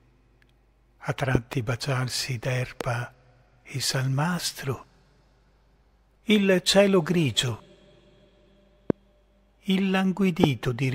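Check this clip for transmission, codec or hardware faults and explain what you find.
Hardware faults show up as five loud pops, likely from sudden voltage steps such as a plug, switch, static discharge or driver glitch.

From 1.35 to 1.55 s, a double loud pop: two pulses enter the signal in quick succession, about 20 dB above the sound, which continues underneath.

From 2.81 to 2.83 s, a single loud pop: a short pulse, about 15 dB over the signal, shaped by the following circuits into a sharp crack.

From 8.90 to 8.92 s, a loud pop: another brief spike, about 20 dB above the sound, heard as a sharp thump over it.

From 10.44 to 10.46 s, a loud pop: the strongest pulse, about 25 dB over the signal, giving a hard, abrupt click on top.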